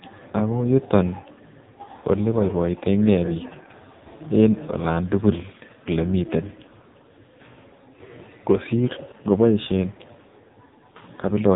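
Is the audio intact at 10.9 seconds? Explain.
No. At 10.9 s the speech carries AMR narrowband mobile codec damage, present across the whole clip. The codec rebuilds speech from a vocal-tract model excited by sparse pulses, and nothing above 3.8 kHz survives. The heavy buzzy, synthetic quality fits a low rate near 5.9 kbps.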